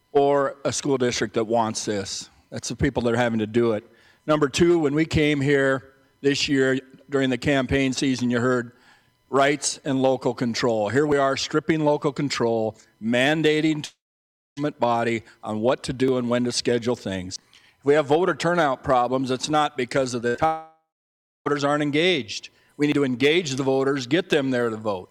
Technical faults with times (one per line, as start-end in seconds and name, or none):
11.12 dropped buffer (overrun)
13.85-14.58 long network dropout
16.08 dropped buffer (overrun)
17.36 dropped buffer (overrun)
20.20-20.40 short concealed packet loss
20.28-20.36 burst of packet loss
20.46-21.47 long network dropout
22.92 dropped buffer (overrun)